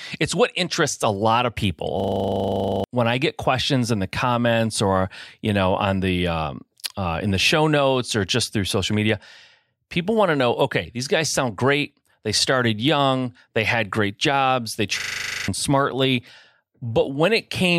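At 2.0 s and again at 15.0 s the system stalled while the audio hardware kept replaying its last 40 ms buffer, a system hang loop. Each sounds like a 25 Hz buzzing stutter, lasting to 2.84 s before "when I get questions" and to 15.48 s, swallowing about a second and half a second of speech.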